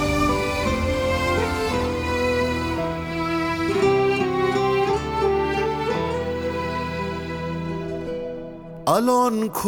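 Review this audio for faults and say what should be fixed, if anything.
Nothing stood out on listening, so there is nothing here that needs fixing.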